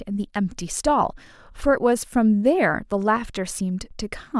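No technical faults can be heard in the recording. There is nothing here to place in time or describe.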